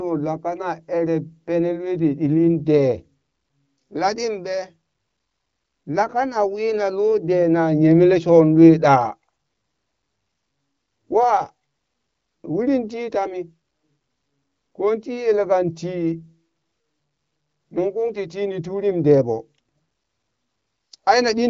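Nothing goes wrong anywhere in this speech clip; it's simply carried over an AMR wideband (HD Voice) link at about 15.85 kbit/s, so the sound tops out around 7.5 kHz as you'd expect from that codec.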